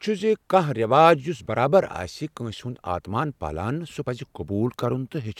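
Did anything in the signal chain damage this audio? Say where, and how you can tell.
No, no damage detected.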